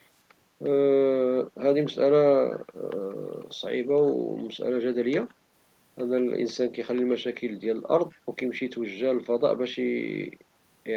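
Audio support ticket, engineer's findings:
Echo leak at 8.1–8.18 s: very faint scrap of speech returning about 200 ms late. Likely far-end echo canceller letting some loudspeaker pickup slip back.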